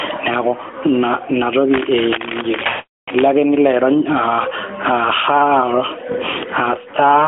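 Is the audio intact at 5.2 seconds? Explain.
No. Gain pumping affects the whole clip, including 5.2 s. The gain swings around 20 dB, pulling loud and soft parts closer in level and squashing the sound, likely from a fast limiter reining in excessive gain. The waveform shows the level ducking under each loud sound.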